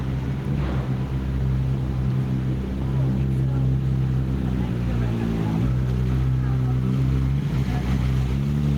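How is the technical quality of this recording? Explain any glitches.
The recording suffers from gain pumping throughout. The gain swings by around 5 dB, pulled down under each loud sound, so the sound is squashed. Input gain was likely set far too high, so a fast limiter clamps down repeatedly.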